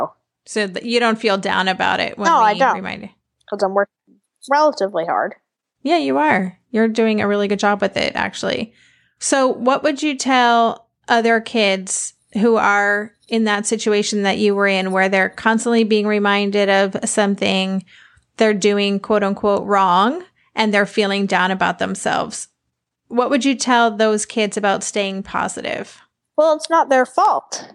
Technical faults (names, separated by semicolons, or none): none